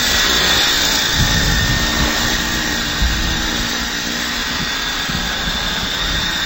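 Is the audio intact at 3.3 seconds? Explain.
No, at 3.3 seconds stereo read as mono runs throughout: interleaved samples treated as one channel halve the speed and drop pitch an octave, with a faint mirrored image up high unlike simple slowdown.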